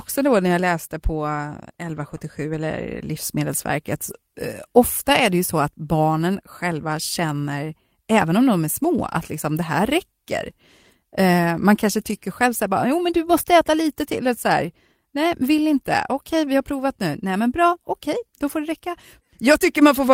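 Lost packets rebuilt from error correction occur at 1.95 to 1.97, 4.09 to 4.15, 8.17 to 8.23, 13.41 to 13.43, 16.75 to 16.81 and 18.47 to 18.57 s. The decoder substitutes low-bitrate backup copies carried in the following packets, so there is no gap, only brief rougher, noisier patches.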